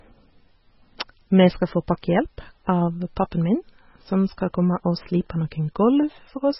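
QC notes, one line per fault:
Throughout, MP3 compression: the speech has nothing above 5.6 kHz, a hard treble ceiling rather than a gentle roll-off, and the damage is heavy, with a watery, swirling texture as weak frequency components drop in and out from frame to frame. S sounds turn metallic and chirpy, and consonant attacks smear. This is likely a low-bitrate MP3 encode, in the region of 16 kbps, where the encoder starves the upper band and discards detail its hearing model treats as inaudible.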